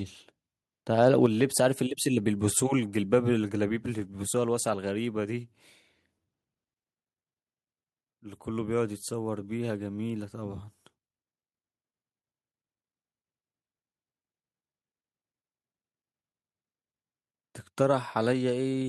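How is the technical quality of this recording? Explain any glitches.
Two brief glitches come close together near the start of the speech.

From 1.02 to 1.08 s, the loudest peak takes on a harsh, crackling edge. This is microphone overload: the input was likely set so high that the peak ran about 1 dB past the converter's ceiling, flattening the tops of around one percent of the samples.

At 1.26 s, voice and background both drop suddenly by about 4 dB and stay at the lower level. This is the microphone volume being stepped down, likely by the call software reacting to that distorted peak with a single cut to the device's input gain.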